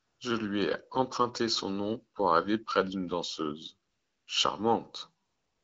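Throughout, channel delay causes comb filtering. One channel lags by about 0.7 ms, and the mono sum gets hollow, evenly spaced notches starting near 700 Hz. AMR comfort noise fills 0 to 0.19 s, 3.89 to 4.27 s and 5.25 to 5.63 s. There the real background gives way to smooth synthetic hiss, with no speech frames sent.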